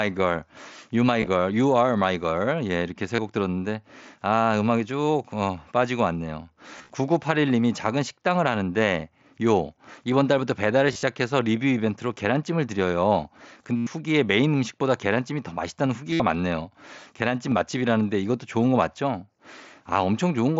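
Brief buzzy, held-tone patches replace the speech at 1.20–1.27, 3.16–3.19, 6.78–6.90, 10.88–11.03, 13.76–13.87 and 16.11–16.20 s, with a nearly hidden single loss at 17.51 s. The longest solid runs, about 105 ms near 13.8 s and 75 ms near 16.1 s, sound most like a tone frozen at full level, with a slight warble as real speech resumes. This is concealed Bluetooth headset packet loss. Audio packets from the headset were dropped, and the receiver filled each gap by repeating the best-matching recent stretch of waveform.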